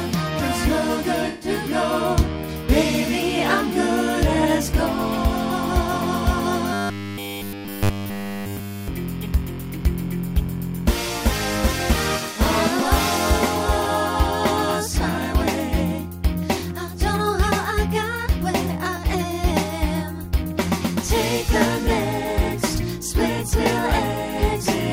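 A run of AAC frames went missing between 1.28 and 1.49 s, about 128 ms, which points to roughly six lost frames. The decoder covered the gap by extrapolating from the last good spectrum, so that stretch sounds smeared and noisy, with a phasey wash instead of clean detail. From 6.73 to 8.88 s, new audio likely arrived too rarely and playback kept repeating a short buffer of about 10 ms while the real audio was skipped. Essentially all of that stretch becomes robotic sound from repeated short buffers, a rigid, metallic 100 Hz buzz that only loosely follows the underlying sound.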